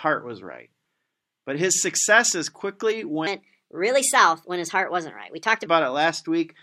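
A speech clip with a section at the wrong speed from 3.27 to 5.66 s. It plays 1.27 times fast, raising pitch about four semitones. Likely a clock mismatch.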